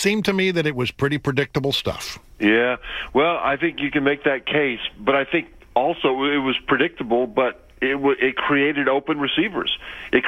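No technical faults can be heard at any point in the clip.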